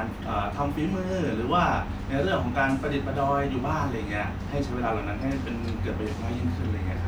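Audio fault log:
No fault to log for this speech clip.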